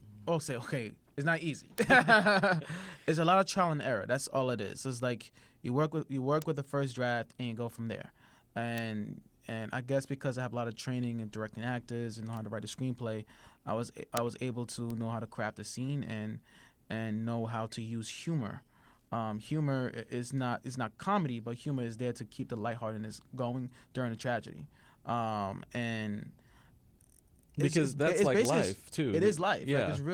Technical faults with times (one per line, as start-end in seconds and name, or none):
1.78 bit error spike
6.42 bit error spike
8.78 bit error spike
12.37 bit error spike
14.17 bit error spike
14.90 bit error spike
28.45 bit error spike